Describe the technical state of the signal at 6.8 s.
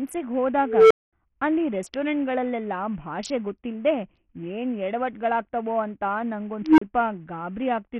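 At 6.8 s you're right at the tail of an unstable filter fault, 6.63 to 6.82 s. A roughly 300 Hz tone balloons over about 150 ms, clips, then overflows into about 35 ms of dead silence. Underneath, the whole clip has thin, flickering treble and gritty grain, likely from heavy Bluetooth SBC compression starving the top sub-bands, consistent with something like a 48 kbps stream.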